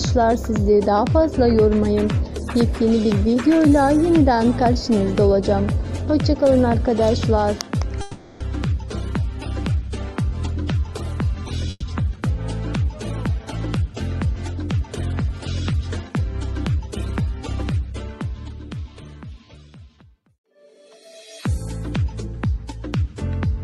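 From 8.01 to 8.42 s the sound stretches into a fading buzz or hiss for about 390 ms, then resumes intact: a call audio freeze, likely from delayed packets draining the jitter buffer.

At 11.70 to 11.84 s a burst of packet loss leaves a 120 ms held, fading buzz or hiss ending in brief silence, and the audio jumps ahead past the lost portion.

A jitter buffer speed-up runs the sound faster but at unchanged pitch from 13.28 to 16.1 s (106%), 20.43 to 20.59 s (131%), and 21.47 to 23.04 s (104%), sounding hurried in the first two stretches. In each stretch the receiver trimmed short pitch-period slices to shrink its backlog.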